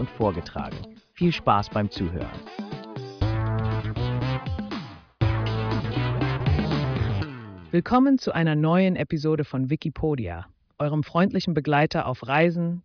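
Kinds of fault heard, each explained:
No faults can be heard in this audio.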